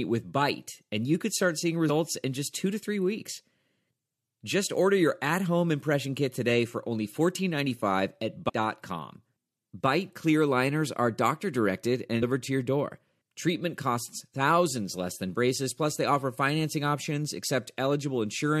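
Damaged data in a compressed stream appears at 1.88 s, from 8.48 to 8.50 s, and at 12.22 s, each under a few hundredths of a second. Corrupted bytes make the decoder misread frames and lose sync while it hunts for the next header, leaving a brief chirp, squawk, click or gap in the speech.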